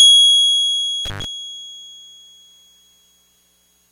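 At about 1.05 s the music drops out abruptly, with a brief crackle as it goes, and what remains for roughly 100 ms is only a faint hiss before the signal snaps back with another crackle, the whole disturbance over by about 1.25 s. This is an intermittent contact: a loose plug or cable momentarily lost its connection, breaking the signal path, and the scratchy metal-on-metal contact at making and breaking produced the crackle on either side.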